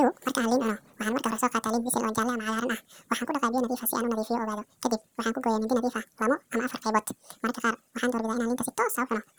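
Audio read two samples at a time throughout: sample pairs become single frames, so the speech plays at 2x speed, an octave higher.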